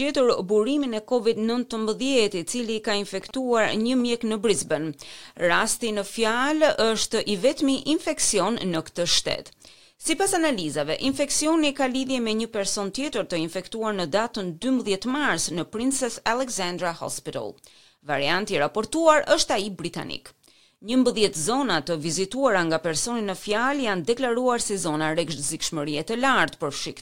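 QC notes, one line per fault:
3.21–4.02 s and 14.40–15.59 s, GSM signalling bursts: two short stretches of that galloping dit-dit-dit, short little buzzes at about 217 Hz, sitting roughly 20 dB under the programme. That's a 2G phone close by doing its signalling chatter rather than a full call. The audio circuitry is rectifying the radio bursts, so their pulse rhythm comes out as audible clicks and buzz, which is why it's in short clumps instead of a steady drone.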